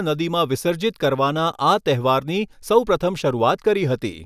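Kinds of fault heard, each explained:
No faults detected.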